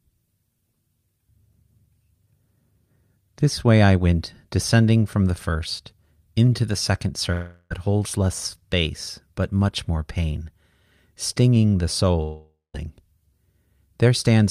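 At 7.32–7.72 s and 12.22–12.76 s, speech turns into a fading buzz, likely a long network dropout. The spectrogram shows smeared tails, and the second ends in a flat gap.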